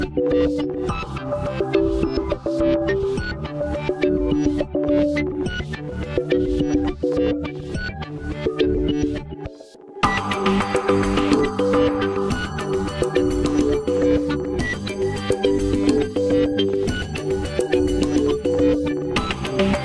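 No technical faults can be heard at any point in the audio.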